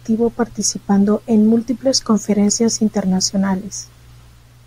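Nothing audible disrupts the signal path in this speech recording; level, timing and continuity hold steady throughout with no technical fault to report.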